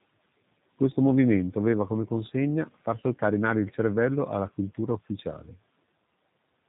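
From start to finish the speech carries G.729 codec damage, and it is plainly audible. The coder rebuilds each short frame from a vocal tract filter, a pitch predictor and a few excitation pulses, so the voice comes out rough and faintly synthetic, as you would expect at a rate around 8 kbit/s. On a spectrogram, energy stops flat at about 3.8 kHz, with empty space above and blurred harmonic detail below.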